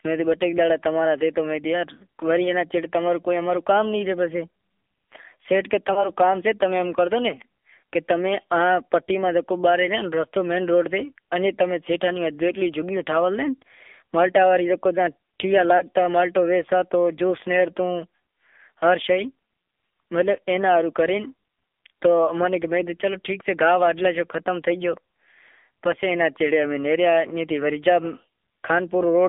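Throughout, the speech carries AMR narrowband mobile codec damage. Nothing above 3.5 kHz or below 250 Hz comes through, and the voice sounds plainly buzzy and synthetic, which fits a low rate around 7.4 kbps. Simple telephone band-limiting would sound muffled but clean, whereas here the pulse-driven vocal tract model adds a rasp.

At 5.94 s and again at 15.78 s, lost AMR speech frames each cause a brief dip or warble, which fits a single 20 ms frame going missing. The decoder repeats the last good pitch and vocal tract settings at falling gain, so the sound smears briefly instead of clicking or dropping to silence as a plain dropout would.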